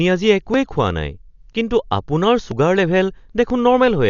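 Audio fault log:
throughout: Dolby Digital compression. The sound is dull, with nothing above about 6.9 kHz. Heavy coding damage leaves a rough, fluttering noise around tones. This is likely from low-bitrate AC-3 style coding, and the damage points to a rate near 48 kbps.
0.54 s, 1.53 s, 2.51 s, 3.50 s: audio missing between chunks. A very short piece drops out at each point. The edges are joined with no gap, so it sounds like a skip. The skips repeat about once a second, likely from one-second processing chunks.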